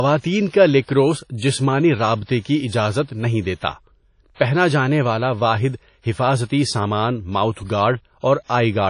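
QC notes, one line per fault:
throughout: WMA compression. The sound points to a transform codec, likely WMA at a low bitrate in the region of 32 kbps, with long blocks. Its quantisation noise smears across tens of milliseconds, so the speech has a ringing, washy quality and a hiss that swells and fades with the level. Weak spectral lines have been zeroed, and nothing survives above about 10.1 kHz, which leaves the top end dull. The damage is plainly audible.
0.82–0.88 s: pre-echo. A sharp onset lands late in a transform block. The coding noise, sized for that loud attack, is spread evenly across the whole block, so it also fills the near-silent gap just before it. This produces a brief hiss about 59 ms long leading into "جسمانی رابطے". The attack that follows sounds softened and smeared instead of crisp.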